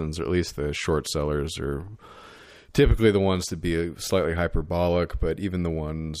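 Nothing in the speech stood out as a technical problem on listening.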